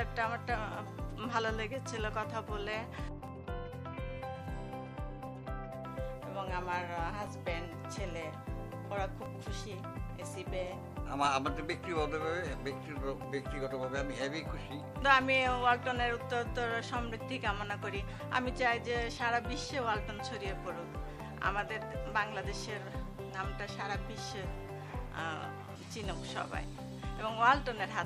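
Regular small ticks or pops cut through the audio every 2.0 s from 1.29 s to 27.17 s, about fifteen in all, each where a few milliseconds of sound are skipped outright. These are periodic USB or driver dropouts, with something stalling the audio path on a fixed cycle.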